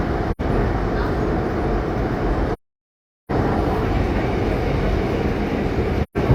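AAC frame loss with muting opens three gaps: 0.31 to 0.41 s (about 85 ms), 2.53 to 3.31 s (about 768 ms, roughly eighteen frames' worth), and 6.03 to 6.17 s (about 128 ms). The decoder filled the missing frames with zeroed spectrum, so the overlapping windows taper the sound down into silence and back up, leaving soft-edged holes. On a waveform each appears as a fade to a flat line. A spectrogram shows blank vertical bands across all frequencies with blurred borders.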